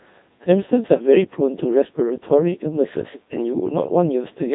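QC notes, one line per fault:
Throughout, Codec 2 vocoder: the speech was reduced to pitch, voicing, energy and a spectral envelope, then rebuilt from sine waves, so the original waveform is gone. The heavy damage points to about 2.4 kbit/s. It sounds robotic and buzzy, with nothing above 3.8 kHz.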